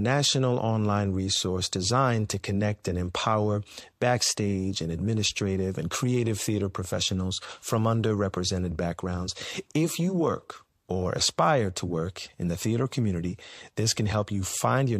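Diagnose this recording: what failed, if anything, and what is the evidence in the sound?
Codec pre-echo at 2.83 s: hiss rises about 12 dB for 15 ms before an attack, quantisation noise smeared across a long block, unlike a click, which follows no attack.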